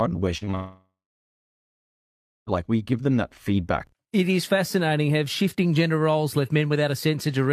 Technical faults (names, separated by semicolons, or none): short concealed packet loss; long network dropout